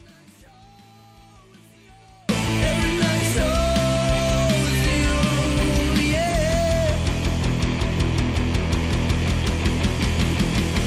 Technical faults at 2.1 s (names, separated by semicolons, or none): audio dropout to a faint residue